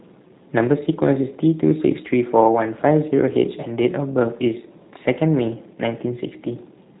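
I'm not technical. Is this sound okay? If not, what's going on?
No. Throughout, the speech has G.729 codec damage, the internet-phone kind. It sounds rough and slightly robotic, with nothing above 3.8 kHz, unlike an ordinary phone line's clean muffling.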